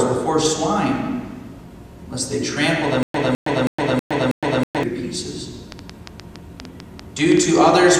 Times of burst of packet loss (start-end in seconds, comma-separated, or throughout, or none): none